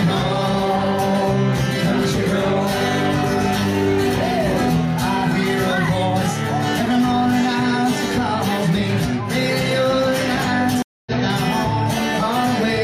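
Around 10.82 s the audio hits a stream reconnect: the connection drops, giving about 0.24 s of silence, with the reconnect over by 11.12 s. The player then spins up a fresh decoder and picks up roughly 150 ms further along, so a small slice of the sound is skipped.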